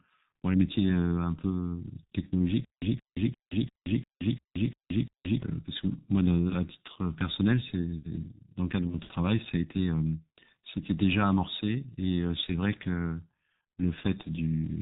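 From the start, the speech carries heavy G.723.1 codec damage. The sound is muffled and hoarse, with nothing above 4 kHz, and consonants smear because the coder's voice model updates only once per 30 ms frame. The degree of damage fits a G.723.1 coder running near 6.3 kbit/s, which leaves little detail for the source model to preserve.

From 2.65 s to 5.42 s there is a stutter with silent gaps. A 174 ms fragment plays, drops to digital silence for 173 ms, and returns, giving an even cycle of about 347 ms that repeats eight times. The likely cause is a stalled player or stream that replayed its last buffered fragment on each retry and then ran dry. Whatever should have sounded in that span is missing.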